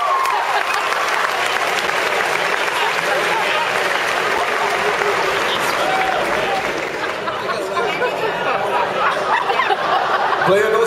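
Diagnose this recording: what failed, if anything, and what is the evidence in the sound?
Gap between chunks at the storage or playback stage: short hard-edged holes of about 6.5 ms at 1.87, 4.38, 6.89 and 9.39 s, about 2.5 s apart. The audio was cut into 2.5 s chunks, with silence inserted at each join. Unlike a dropout, no sound is lost.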